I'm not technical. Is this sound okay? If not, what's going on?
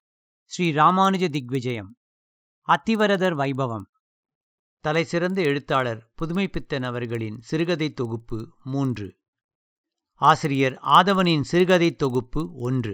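No. There is a steady buzzing tick under the speech from start to finish. This comes from a fault called a resampler restarted on every block. The audio was converted to a higher sample rate in small pieces, each 50 ms long. Each piece was handled alone, so its edges came out slightly wrong. Those small errors repeat 20 times a second. You hear them as a rough buzz that rides along with the speech and drops away in pauses.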